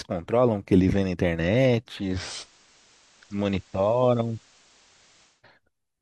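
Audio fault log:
1.95–5.44 s digital radio blending to analogue: losing the digital stream, the receiver cross-faded over 217 ms to the FM broadcast and later back, so the speech shifts about 3 dB in level and carries faint hiss.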